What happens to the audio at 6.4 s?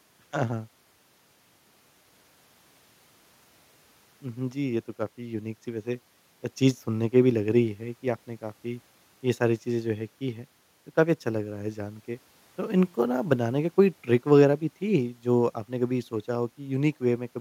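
Nothing goes wrong at 6.4 s: the speech continues intact through that moment, with no dropout, click, distortion or other fault.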